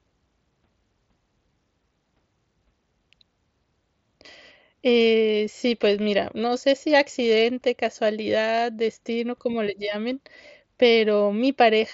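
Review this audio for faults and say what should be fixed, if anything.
Nothing in this speech needs fixing. It carries the sound of a Bluetooth mSBC headset link, with the band reaching up to 8 kHz, a light graininess on the louder syllables, and faint upper bands that come and go.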